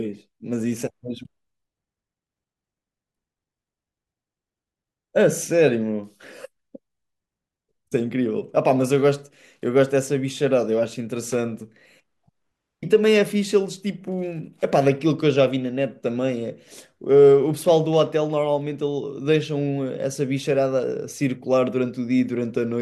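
No technical faults detected.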